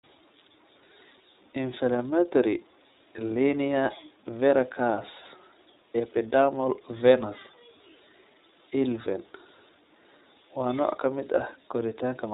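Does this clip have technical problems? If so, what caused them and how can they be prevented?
Yes. The whole speech clip runs through the iLBC codec. Nothing above 4 kHz gets through, and each frame's excitation is coded on its own, so it sounds plainly rough and a bit synthetic, which fits the 30 ms, roughly 13 kbps mode. Use a wideband codec instead to prevent it.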